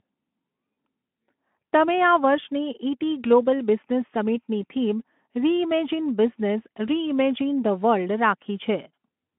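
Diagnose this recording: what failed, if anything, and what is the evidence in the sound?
Nothing has failed: the speech comes through a Speex link at about 15 kbps, confined to a telephone band of roughly 200 Hz to 3.4 kHz with nothing above 3.4 kHz, and carries only the light coding texture expected at that rate.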